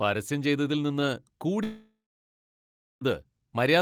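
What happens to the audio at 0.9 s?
Nothing goes wrong at 0.9 s; the speech there comes through intact, with no dropout, click, distortion or other fault.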